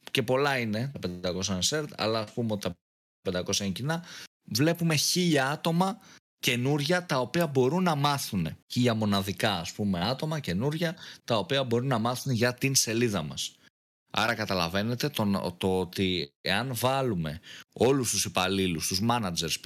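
From 1.41 to 2.41 s there is channel delay with comb filtering. One channel runs about a sample late, a tiny fraction of a millisecond, before the mix to mono. The first cancellation sits around 20 kHz, so the top end just sounds dulled.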